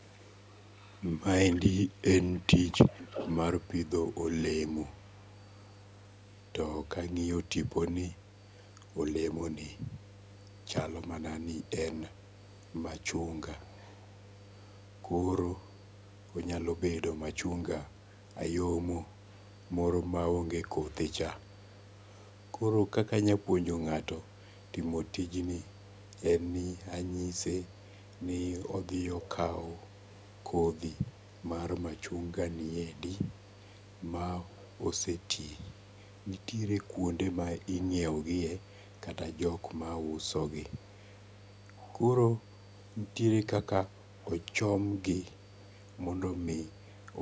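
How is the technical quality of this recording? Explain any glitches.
The quality is held back by two problems: a steady mains hum under the whole recording, and a delayed second copy of the speech that trails along for most of it.

The mains hum runs from start to finish as a low, constant 50 Hz drone, sitting roughly 20 dB below the speech. That's the power line getting into the signal, through a ground loop or a transformer close to the cabling, and it comes across as a dull buzz that never lets up.

The echo leak shows up as a repeat of the speech landing about 250 ms behind the original. From 0.73 to 10.64 s it's around 15 dB down. From 13.66 to 46.8 s it drops to something like 35 dB down. This is likely one end of a call playing the audio over a loudspeaker, with its echo canceller not fully removing what its microphone picked up, so some of it was sent back. The top end stops at 8 kHz, which is just the call's microphone processing.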